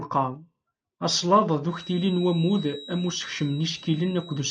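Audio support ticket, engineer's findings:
Feedback whistle, 1.64 s to end: 3.9 kHz tone about 20 dB below speech. Likely speaker-to-mic loop near ring point. Spectrogram: thin horizontal line at 3.9 kHz.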